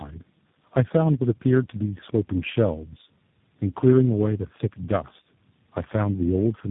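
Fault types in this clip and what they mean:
Tandem speech coding: The speech passed through several low-rate speech coders in a row, each re-coding the last one's damaged output. The errors pile up. The sound is rougher, more muffled and more warbly than one coder would leave it. Nothing reaches above 3.8 kHz. The layered roughness points to about four coding stages, ending with a G.729A-style coder, with plain telephone links between them.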